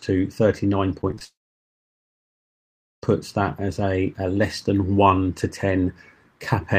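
From 1.01 to 1.22 s the audio turns choppy, with four short holes, the longest about 20 ms, and about a third of that stretch filled in rather than real. This is repeated packet loss: packets kept failing to arrive, and each gap was patched by extending the last bit of sound before the next loss hit. Right after, from 1.24 to 3.04 s, the sound collapses into a brief fading continuation and then about 1.7 s of silence before returning with that section missing. That behaviour points to a likely long network dropout, where nothing reached the receiver for nearly 1.8 s and concealment could only stretch the final fragment briefly before giving up.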